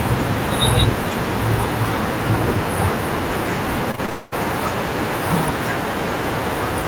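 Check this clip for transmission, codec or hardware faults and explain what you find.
The speech shows two transmission faults, clustered just before and around the 4-second mark.

Short concealed packet loss occurs at 3.91, 3.95 and 4.06 s, each about 20 ms of missing audio. The receiver patched each gap by extending the preceding sound, giving brief smears or wobbles. A spectrogram shows smoothed, repeated harmonic slices with soft seams.

A long network dropout follows from 4.10 to 4.34 s, likely a stall in arriving packets. About 0.22 s was synthesized by stretching the last sound, so it turns into a fading buzz or hiss rather than silence. The waveform shows a repetitive, decaying segment, and the spectrogram shows frozen, blurring bands.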